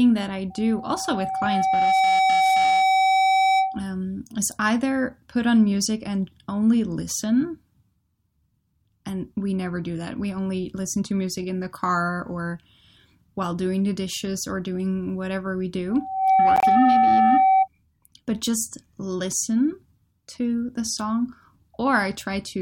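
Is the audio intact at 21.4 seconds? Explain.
Yes, the audio is intact at 21.4 seconds, with no fault at that moment.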